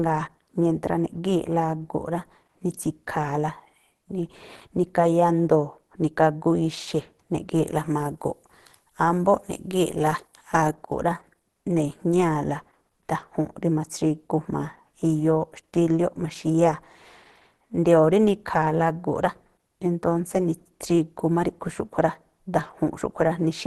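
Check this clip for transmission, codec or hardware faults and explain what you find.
One codec fault runs through the whole clip: Opus compression is the likely cause. The speech sounds muffled and hoarse, with a grainy, rough texture and nothing above 12.1 kHz. This fits Opus's hybrid mode at about 16 kbps, where a speech coder handles the low band and band-energy coding with noise fill covers the rest. MP3 leaves spectral holes that swirl and warble, while this fills them with noise, so the damage is roughness, not watery artefacts.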